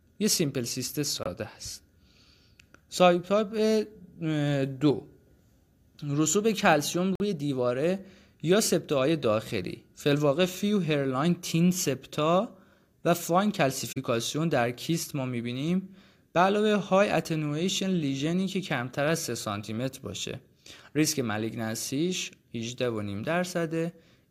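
At 1.23 s, 7.15 s and 13.92 s the speech drops out abruptly in a corrupt frame muted fault, with gaps of about 36, 64 and 58 ms that fit one, three and two lost frames. Damaged compressed frames were rejected by the decoder and silence was substituted, so timing stays intact. On a waveform each gap is a flat line with sharp edges; a spectrogram shows a clean vertical band with no energy at any frequency.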